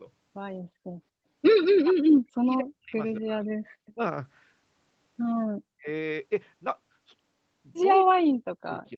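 From 1.78 to 2.95 s the speech sinks by up to about 40 dB, most likely speech suppressed in double talk: with both sides talking, the echo canceller could not tell this talker from the far-end echo and turned everything down. The same dips return at 3.2–3.48 s (about 25 dB), 3.95–3.99 s (about 15 dB), 5.77–5.87 s (about 40 dB) and from 8.05 s to the end. On a waveform the envelope collapses into gaps. A spectrogram shows the harmonics fading or breaking into vertical slices.

At 3.86–3.93 s a brief, faint echo leak is heard: a copy of the voice about 274 ms late, roughly 30 dB below the speech. It is likely residue that the loudspeaker side's canceller failed to remove and sent back. On a spectrogram it is a weak smear echoing earlier harmonic patterns. It barely marks the waveform.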